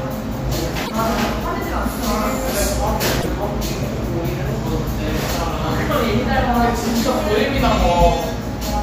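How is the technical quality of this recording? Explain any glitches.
Two brief glitches from damaged data in a compressed stream, at 0.82 s and 3.18 s, each lasting about 80 ms. Corrupted bytes make the decoder misread frames, lose sync and hunt for the next header, giving a short chirp or squawk, unlike a clean dropout's plain gap of silence.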